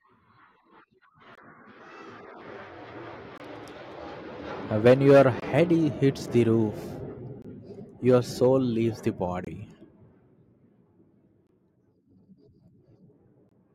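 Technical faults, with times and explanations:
1.35–1.38, 3.38–3.40, 5.40–5.42, 7.42–7.45, 9.45–9.47 (just after "your soul leaves the"), 11.47–11.49 and 13.49–13.51 s, gap between chunks: the speech drops into short holes of about 23 ms, recurring every 2.0 s. The audio was delivered in 2-second chunks with silence inserted at each join, so the sound is interrupted there but nothing is lost.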